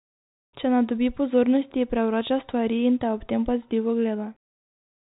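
No faults are audible anywhere in this speech recording.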